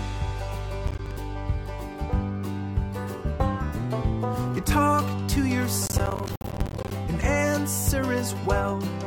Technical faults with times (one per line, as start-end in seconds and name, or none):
0.87-1.17 processor overload crackle
5.86-6.91 processor overload crackle